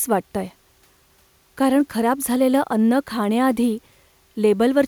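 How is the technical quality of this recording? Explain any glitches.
No glitches or faults detected.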